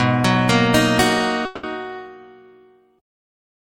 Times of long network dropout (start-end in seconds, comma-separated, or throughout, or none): 1.45-1.66